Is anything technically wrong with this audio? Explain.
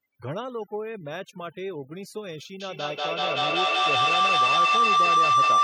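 Yes. The speech has two problems: heavy processing throughout, and a feedback howl that takes over in the second half.

Overdone noise removal affects the whole clip. The noise reducer was set so aggressively that any frequency band close to its noise estimate gets pushed down or gated off, and the quieter parts of the voice are cut along with the noise. The background drops and breaks up into small twinkling specks. Low-bitrate codec damage can sound similar, but here the artefacts sit in the gaps and quiet edges rather than smearing the loud parts.

A feedback howl starts at about 2.6 s and lasts to the end of the clip. Sound from a loudspeaker is reaching a microphone on the same call, and the loop adds level on each pass instead of losing it. The signal narrows to the pitch the loop favours, a tone around 1 kHz that peaks about 13 dB above the speech, with a loop delay of roughly a fifth of a second. 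Ordinary echo repeats and fades. This tone keeps growing and holds one pitch.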